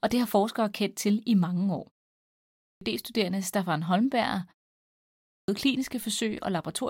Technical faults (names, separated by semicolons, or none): clipped start after a pause